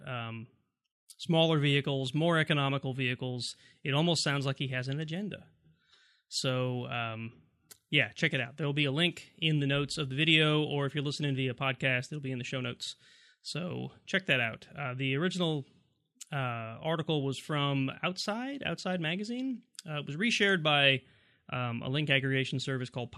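No technical faults occur at any point in the recording, so there is nothing to describe in time order.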